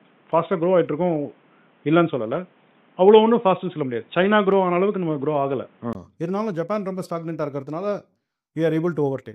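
From the start until 5.95 s the input was likely switched to a poorer device passing nothing above 3.8 kHz, so the sound is dull and boxy, with faint added background noise and a level shift of a few decibels. A 20 ms gap at 5.95 s precedes fuller sound.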